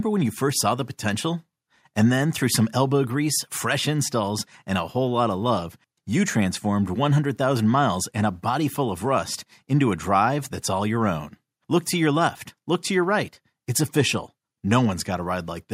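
Nothing in the speech stood out as a technical fault on listening.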